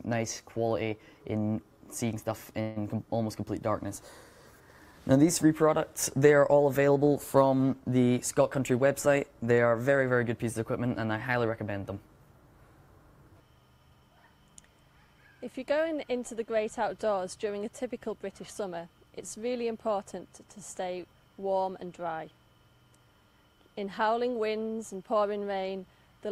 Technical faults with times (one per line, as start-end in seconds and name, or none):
2.61-2.78 call audio freeze
8.60-10.11 jitter buffer speed-up